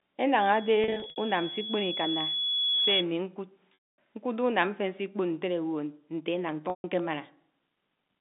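Right from 0.53 s a loudspeaker feedback squeal starts creeping in: a thin, single tone at 3.4 kHz that swells over a couple of seconds until it sits a little above the speech, then cuts out at 3.06 s. That's the mic hearing its own loudspeaker, with the loop gain at that one frequency tipping over one, so the tone keeps feeding itself until the loop is broken. It sits just inside the telephone band, which runs roughly 150 Hz to 3.7 kHz here, so nothing softens it.

While the squeal is still going, from 0.84 to 1.16 s, there's packet loss with pitch repetition: short scattered dropouts across about a third of a second, the longest around 60 ms. The receiver patches each gap by looping the last pitch period, so they come out as brief held, buzzy snags rather than clean silence. The loss pattern fits 20 ms packets. The longer gaps sound different: 3.74 to 3.96 s loses about 240 ms, and 6.70 to 6.84 s about 140 ms. 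There the repeated cycle fades away, and the speech cross-fades back in after a moment of nothing.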